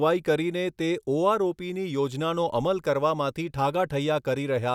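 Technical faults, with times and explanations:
Nothing technical stands out in this speech recording; it comes across as steady and untroubled all the way along.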